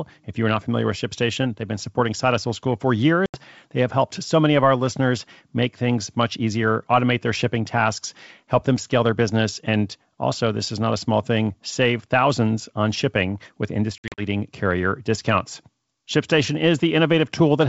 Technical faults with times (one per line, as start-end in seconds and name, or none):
3.26-3.39 packet loss on an ADPCM call
13.98-14.23 packet loss on an ADPCM call